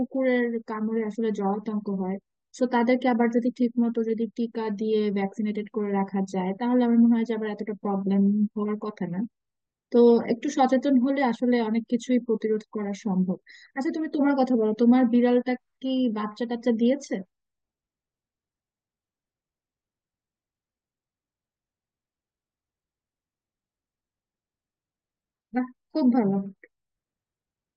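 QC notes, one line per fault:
No faults heard anywhere in this recording.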